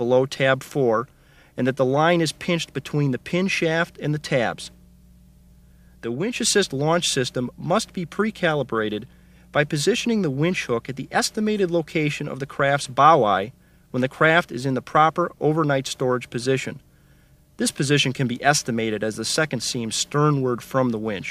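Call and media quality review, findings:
Sudden gain jump, 6.04–6.36 s: likely a digital gain setting applied from one sample to the next with no ramp. Level drops abruptly by about 6 dB, with the background noise falling along with it, then snaps back up at 6.36 s.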